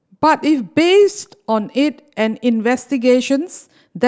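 Nothing in the speech stood out as a technical problem on listening.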